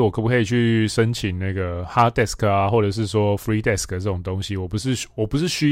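Nothing in this bit of speech stands out as a technical problem, so there's really nothing here to flag.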